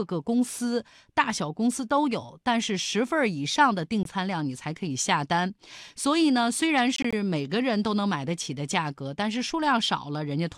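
At 4.03 to 4.05 s the speech cuts to silence for about 20 ms. From 6.96 to 7.13 s, 61 ms of short holes are scattered, none longer than 20.3 ms. Each resumes as if it had played on, the mark of a Bluetooth dropout, likely from single lost packets.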